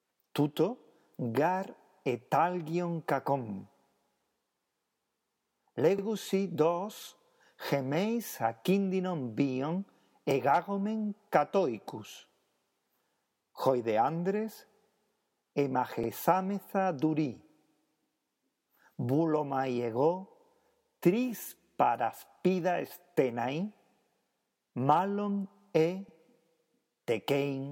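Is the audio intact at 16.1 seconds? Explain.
No. An overlapping chunks fault occurs here: the audio was handled in 10-second chunks, and one chunk began 50 ms before the previous one ended. That 50 ms stretch, 16.04 to 16.09 s, plays twice, heard as a brief click or stutter.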